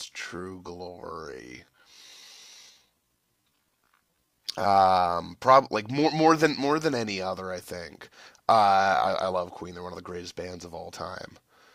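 From 0.0 to 5.18 s the speech drags at unchanged pitch: a time-stretched section, likely slowed to about 0.58 times speed by repeating short pieces.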